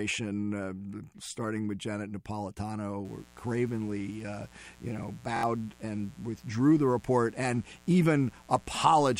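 From 3.05 s to the end, 60 Hz mains switching spikes leak into the signal as mains buzz, a steady, raspy buzz at about 30 dB below the speech.

Between 5.36 and 5.43 s, audio arrived late and the last buffer replayed three extra times. This repeated buffer, about 23 ms long, fits 1024 samples and is heard as one short piece sounding four times with hard joins.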